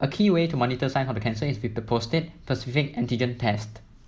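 A speech recording with nothing technically wrong in it.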